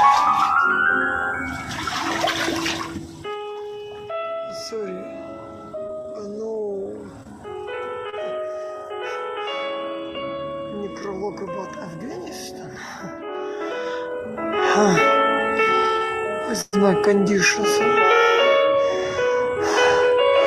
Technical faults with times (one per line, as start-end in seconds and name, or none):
2.68-3.41 zipper noise
5.87-7.27 scattered short gaps
8.10-8.15 short concealed packet loss
13.22-14.76 zipper noise
15.97-16.03 short stall from a late packet
16.61-16.75 call audio freeze